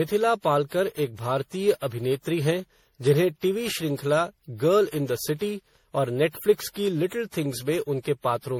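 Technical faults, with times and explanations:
Throughout, generation loss: the speech sounds swirly, smeared and hollow, with blurred consonant attacks, more degraded than a 64 kbit/s MP3 alone would sound. It was likely encoded about ten times, each pass requantising on a shifted frame grid so noise and spectral holes accumulate.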